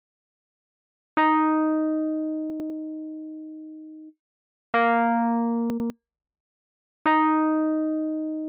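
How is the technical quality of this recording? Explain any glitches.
Two glitches spoil the recording, both chunks out of order. They occur at 2.5 to 2.7 s and again at 5.7 to 5.9 s. In each, a 100 ms chunk of audio arrived one chunk late. It plays after the chunk that should follow it. Nothing is missing, but the two pieces are swapped. That creates three hard joins where unmatched waveforms meet. The result is a brief jumbled stutter.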